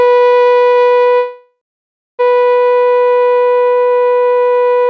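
Call audio freeze, 1.18 to 2.21 s: the music fades into a fill, then 0.6 s of silence, likely from delayed packets emptying the jitter buffer, before resuming where it stopped.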